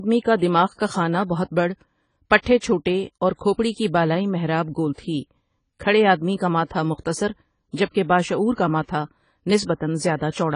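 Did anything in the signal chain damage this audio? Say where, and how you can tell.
Yes, at the codec stage, throughout the speech. Nothing survives above 10 kHz, and sibilants have a fizzy, warbling smear, unlike the clean cut of a plain low-pass filter. That is likely AAC compression, AAC-LC at a bitrate around 24 kbps, starving the upper bands.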